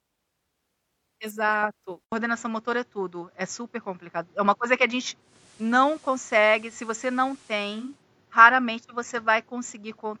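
At 2.04 s the recording system most likely switched its input to a poorer device, such as a different microphone or a headset's call profile, and it stays there to the end. After a silence of 80 ms the speech returns duller and boxier, with a noticeable shift in level, and a new faint background noise sitting well beneath it.

From 5.19 s to 8.04 s, a digital radio blending to analogue occurs. The receiver lost its digital stream and cross-faded over 344 ms to the station's FM broadcast, then returned. During that stretch the level drops by about 2 dB, and steady hiss rises under the speech.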